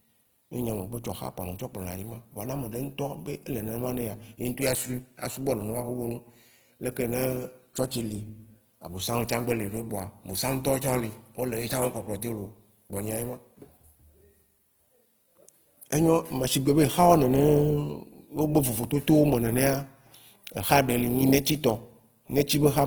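Throughout, the speech sounds grainy and rough, with noisy fill replacing clean tone, likely Opus compression in its CELT mode at a rate fitting 16 kbps.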